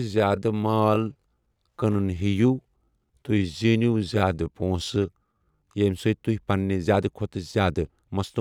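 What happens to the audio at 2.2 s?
At 2.2 s the speech is inside a time-stretched section running from 0.0 to 5.88 s, slowed to about 0.72 times normal pace with pitch unchanged. It sounds dragging, likely from software repeating short slices to lengthen the audio.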